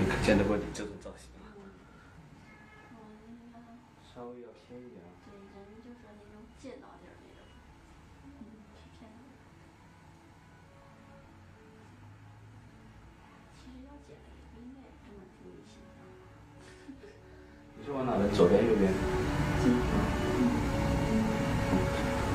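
No technical faults can be heard in this audio.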